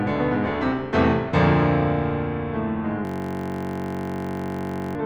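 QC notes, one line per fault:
3.05–4.95 s: system hang loop. A 21.3 ms slice repeats at 46.9 Hz, giving a steady buzz and about two seconds of lost music; this fits a 1024-sample buffer.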